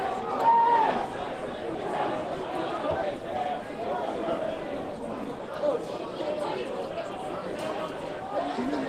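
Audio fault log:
No faults heard anywhere in this recording.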